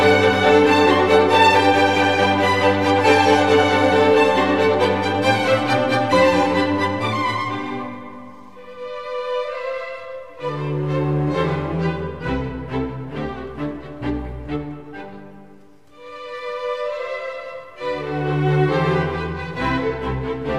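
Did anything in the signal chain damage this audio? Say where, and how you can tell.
No, nothing in the signal chain has audibly damaged this audio. Across the whole clip, no stage from capture to playback leaves any mark that can be heard.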